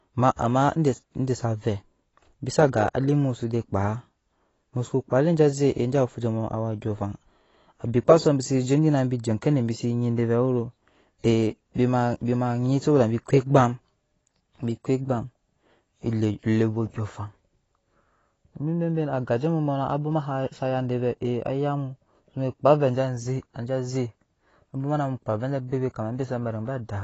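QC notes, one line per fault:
Throughout, AAC compression damage. Nothing is left above 8 kHz, so the speech sounds dull and muffled. Sibilants smear into a fizzy, warbling texture. This is likely AAC-LC coding at a low bitrate, which fits about 24 kbps, discarding bands the encoder judged inaudible.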